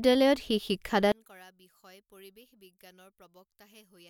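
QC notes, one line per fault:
1.12–4.1 s: one channel inverted. From 1.12 s the speech drops by about 30 dB and stays faint to the end. The likely cause is one stereo channel with reversed polarity. Summed to mono, the shared centred speech cancels, leaving only a faint remnant.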